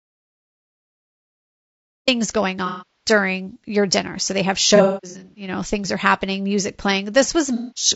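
From the first second to the last, the speech is rough and grainy. Noise fills the gaps between harmonics, and the top band sounds thin and synthetic. The damage is plainly audible. This is likely low-delay AAC compression, AAC-ELD at 32 kbps. Its short frames resolve pitch harmonics poorly, and that bitrate leaves too few bits to hide the grain.

The clip opens inside an audio dropout to silence. It runs from 0 to 2.08 s. The gap is silent, with no room tone at all. The input was likely lost, and silence was written in its place. The speech then starts abruptly, already in mid-flow.

From 2.66 to 3.10 s comes AAC frame loss with concealment, about 330 ms of missing audio, just before "your dinner". The decoder rebuilt the gap from the last good spectrum. The result is a smeared, noisy patch in place of clear speech.

A second loss spans 4.76 to 5.48 s, after "they have" and before "know things are happening". 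About 420 ms is missing, scattered over 600 ms. The longest run is roughly a fifth of a second. The decoder again fills the gaps from the last good spectrum.

A third loss, about 210 ms, runs from 7.55 to 7.87 s. The concealed signal is filled in from the last good spectrum.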